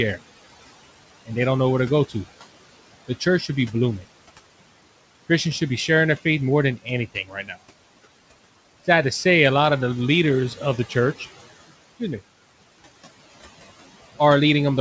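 Throughout the clip, the noise suppressor pulls every band it judges to be steady noise down by about 16 dB, frame by frame. These noise suppressor artifacts make the room noise sink between phrases and rise under them.

From 7.14 to 7.5 s, just after "their faith more than", the suppressor mistook part of the speech for noise and turned it down by as much as about 12 dB. This speech cut by the noise suppressor leaves roughly a fifth of a second sounding swallowed and faint.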